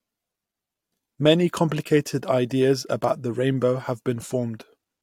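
No technical faults can be heard anywhere in this speech recording; the signal carries no audible damage.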